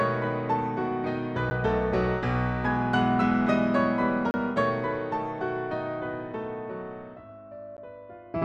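At 1.50 s, from 4.31 to 4.34 s, and at 7.77 s, the signal drops out in a block of digital silence: runs of silence lasting 10 ms, 30 ms and about 13 ms. The cut and the return have no fade, so each edge is a hard step. The two shortest blocks are heard as sharp ticks, and the 30 ms block as a brief hole. Output buffers that weren't filled in time would produce this.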